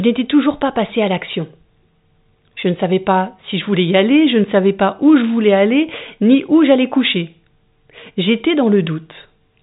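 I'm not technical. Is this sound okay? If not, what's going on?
Yes, nothing stood out on listening to this speech, which has the narrower sound of an ordinary phone line.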